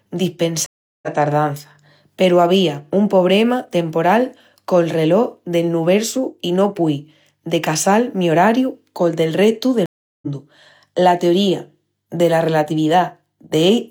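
A stream reconnect occurs twice, from 0.66 to 1.08 s and from 9.86 to 10.28 s. Each time the connection drops, the speech cuts to about 0.37 s of silence, and the player reconnects with a fresh decoder joining the stream mid-flow. Because the live feed kept moving during the gap, speech resumes further along than where it stopped, skipping roughly 0.4 s at the first break and roughly 0.3 s at the second.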